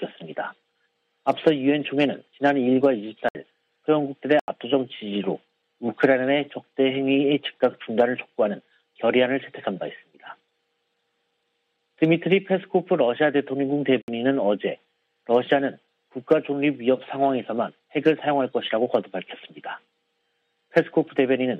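Short holes interrupt the sound at 3.29 to 3.35 s (64 ms), 4.40 to 4.48 s (85 ms, which fits a 4096-sample buffer) and 14.02 to 14.08 s (64 ms). Each is a block of digital silence: the output buffer likely went unfilled in time and was left as zeros.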